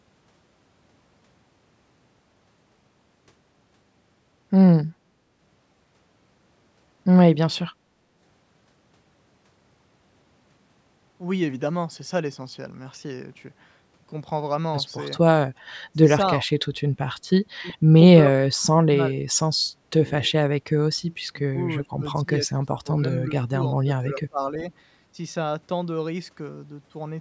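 The speech dips sharply, by about 20 to 35 dB, at 16.41–16.65, 16.96–17.06, 17.70–17.95, 18.31–19.12, 19.84–19.93, 21.21–23.53 and 23.84–24.65 s. This is likely speech suppressed in double talk, where the echo canceller turned down its own talker along with the loudspeaker echo while both sides overlapped. At 17.68–17.73 s a faint scrap of the voice returns about 30 dB down, 383 ms late, likely an echo leak from a loudspeaker's echo canceller.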